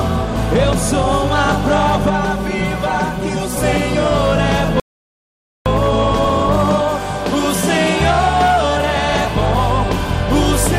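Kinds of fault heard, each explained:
Channel delay (comb filtering): one channel runs roughly 5 ms behind the other, and summing them to mono cancels shared content at evenly spaced frequencies from around 100 Hz upward. From 2.10 to 3.57 s this gives a hollow, phasey colour. A spectrogram shows fixed, regularly spaced dark notch bands.
Rebuffering stall: the player ran out of downloaded audio, so the sound drops to silence at 4.80 s and resumes exactly where it stopped at 5.66 s, adding 0.86 s with nothing lost. The waveform shows a flat, empty gap with continuous material on either side.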